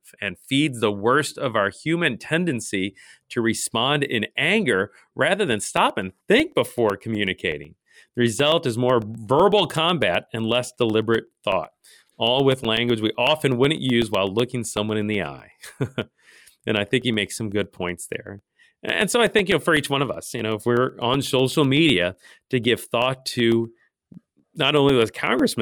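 From 5.52 s to 25.52 s, the speech carries periodic USB or driver dropouts. Every 0.125 s, about a millisecond of audio drops out and is replaced by silence. That is eight gaps a second, around 150 in all. The spacing is exact, which points to a background task stalling the USB bus or audio driver on a fixed schedule. Each gap is heard as a small tick. The ticks sound only while speech is present.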